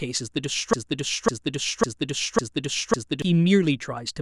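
A broken-record loop runs from 0.73 to 3.22 s: a 0.55 s speech fragment repeats five times, likely a stalled stream resending its last piece.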